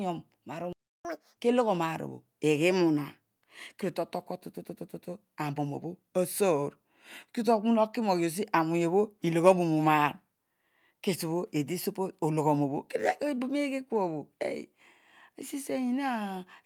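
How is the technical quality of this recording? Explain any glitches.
The recording has two related playback glitches early on, both within the first one and a half seconds.

At 0.73 s the speech cuts out and the output goes completely silent until 1.05 s, a gap of about 0.32 s. This is a playback stall: the audio halts mid-flow and then resumes where it left off. The likely cause is the player running short of buffered data or its output thread being blocked, so nothing reached the output device for that stretch.

From 1.05 s to 1.37 s, immediately after the gap and just before "kelo ghon aar", the speech runs at twice normal speed with pitch raised by around 10 semitones, giving a brief chipmunk-like rush. This is catch-up at higher speed: to recover the time lost in the stall, the player resamples its backlog faster, which raises tempo and pitch together. Once the deficit is cleared, playback drops back to normal rate and pitch.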